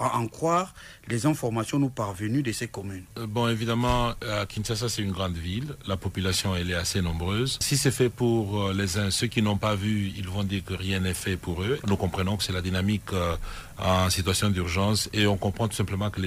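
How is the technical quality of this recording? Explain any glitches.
No technical faults can be heard anywhere in the recording, so there are no glitches to explain.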